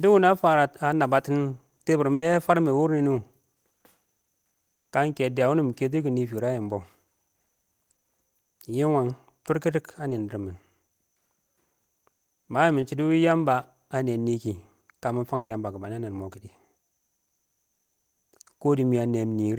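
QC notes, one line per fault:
2.13 to 2.23 s, 4.74 to 4.86 s and 15.35 to 15.51 s, burst of packet loss: about 90, 110 and 150 ms of audio never arrived. The receiver stretched the last sound into a fading buzz or hiss. At 4.74 s the whole 110 ms is silent, and at 15.35 s the last 50 ms goes silent. Then the audio jumps ahead with that stretch missing.
3.14 s, 10.10 s and 12.81 s, short concealed packet loss: about 10 ms dropped out each time. The receiver patched it by extending the preceding sound and blending back in, leaving a brief smear or wobble rather than an audible gap.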